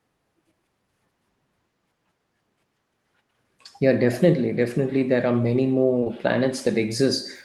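At 5.99 to 6.04 s and again at 6.04 to 6.08 s, short concealed packet loss occurs: two consecutive chunks of about 20 ms each arrived too late, and the receiver bridged them by extending the preceding sound before rejoining the real signal, producing a brief smeared wobble.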